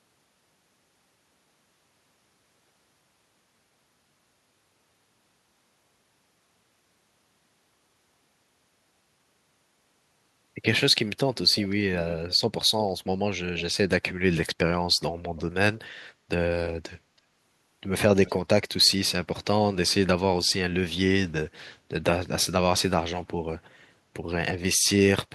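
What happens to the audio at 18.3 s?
At 18.26 to 18.31 s a brief echo leak appears: a faint scrap of the speech returns about 326 ms late, roughly 20 dB down, likely from a far-end loudspeaker pickup the echo canceller missed. The fixed, distinct delay separates it from room reverberation's smooth tail.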